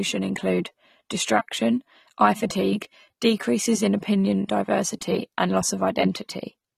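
From start to finish the speech sounds dull and smeared, with a fizzy, warbling texture clinging to sibilants and sustained vowels and a top end that seems trimmed away. This plainly audible damage is likely AAC compression, consistent with AAC-LC at a low bitrate around 32 kbps. Starved of bits, the encoder lowers its cut-off, drops or roughly fills spectral bands, and lets frame-to-frame quantisation shifts produce the swirling texture.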